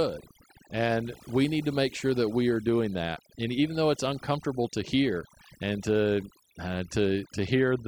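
From start to finish the speech carries overdone noise removal. The noise reduction pulled individual frequency bands down hard wherever they sat close to its noise estimate, taking low-level parts of the voice with them. Pauses drop to near silence with twinkling specks.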